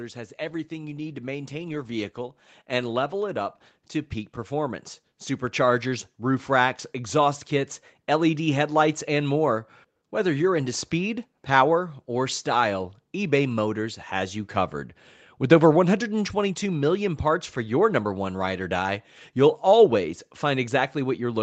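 From 0.37 s to 7.22 s the automatic gain rises. The gain control judged the input too quiet and kept turning it up, by about 10 dB. Voice and background noise swell together, slowly, over those seven seconds. The band stays capped near 8 kHz throughout.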